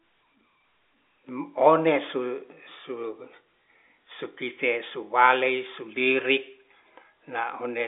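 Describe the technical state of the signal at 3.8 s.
At 3.8 s the signal is intact, with the speech carried cleanly through G.711 telephone coding, narrowband with nothing above about 3.6 kHz.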